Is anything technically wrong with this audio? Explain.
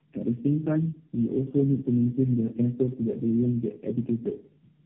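Yes. Throughout the speech there is tandem speech coding, which fits a call that crossed several low-rate codecs in a row, around four speech coders of the AMR-NB and G.729A type. Each one re-encodes the previous coder's already damaged output, so errors compound. The speech sounds rough, muffled and warbly. On a spectrogram, energy stops sharply at 3.7 kHz, and formants look smeared and blotchy.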